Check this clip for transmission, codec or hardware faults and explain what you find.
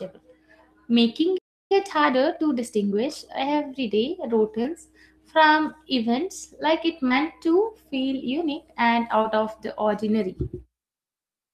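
The clip of speech has three kinds of fault: one playback stall, a stretch of time-compressed catch-up right after it, and three short concealed packet losses.

From 1.37 to 1.72 s the speech cuts out in mid-flow for about a third of a second, then resumes. This is a playback stall, likely from the player running out of buffered data or its output thread being blocked, leaving the output silent until it recovered.

From 1.72 to 3.88 s the speech sounds hurried, about 1.15 times normal speed, yet keeps its pitch. This is time-compressed catch-up: to clear the backlog built up during the stall, the player removes small slices of audio and cross-fades across the joins.

At 4.63 to 4.66 s, 7.08 to 7.12 s (just after "like it") and 9.22 to 9.26 s there are brief smears or wobbles. Each is a short concealed packet loss: about 20 ms of audio arrived too late, and the receiver filled the gap by extending the preceding sound before blending back.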